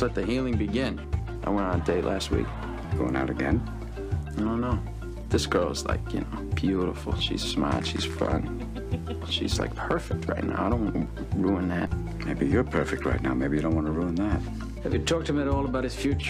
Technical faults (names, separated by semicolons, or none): DC step